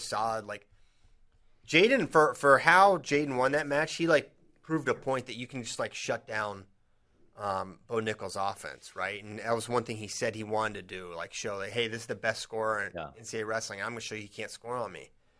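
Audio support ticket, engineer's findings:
No faults found in this speech recording. Nothing audible points to a defect in the capture or playback chain.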